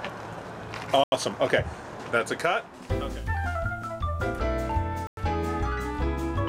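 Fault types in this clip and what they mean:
Bluetooth stall: The audio drops to silence twice, at about 1.04 to 1.12 s for roughly 84 ms and at about 5.07 to 5.17 s for roughly 100 ms, then resumes. This is likely a wireless link stall, where radio interference delays packets so the receiving buffer empties and playback halts until retransmitted data arrives.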